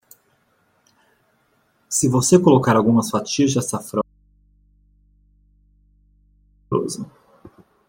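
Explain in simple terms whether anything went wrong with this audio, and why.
Audio dropout to a faint residue, from 4.02 to 6.72 seconds, right after the speaker says "colocar algumas fatias de". The speech cuts out abruptly, and for about 2.7 seconds all that's left is a low, faint mains hum. Then the sound snaps back mid-flow. This isn't a natural pause or a fade. The signal was likely lost for a moment while the line after the break stayed switched on, so it picked up hum instead of the voice.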